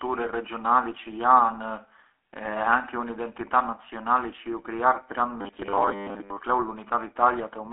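Throughout, the speech carries GSM full-rate codec damage. The band runs about 300 Hz to 3.5 kHz, nothing above 3.8 kHz, with a gravelly buzz fitting 13 kbps.

From 5.41 to 6.41 s the voice turns to a rigid 100 Hz metallic buzz. Most of that second is likely robotic sound from repeated short buffers, each about 10 ms.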